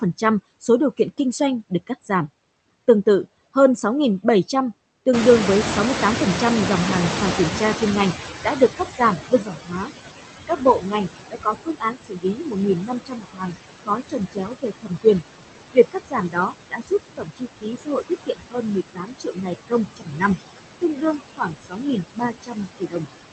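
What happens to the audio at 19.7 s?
At 19.7 s you're inside a stretch of speech cut by the noise suppressor, running from about 15.73 to 20.23 s. With the room noise sitting only about 6 dB under the speech, the suppressor mistakes quieter speech for background and pulls it down with the noise, by as much as about 21 dB, so soft sounds and word endings come out swallowed and faint, adding up to roughly three seconds across the span.

The noise suppressor artifacts are there too, as they are through the whole clip. The noise gets knocked down by about 19 dB band by band, frame by frame, so it sinks between phrases and rises again under the words.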